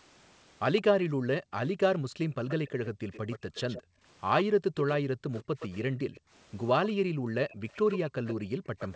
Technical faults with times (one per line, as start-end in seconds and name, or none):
0.76-0.82 echo leak
1.06-7.39 background gated by the echo canceller
2.48-8.96 echo leak
8.36-8.73 background gated by the echo canceller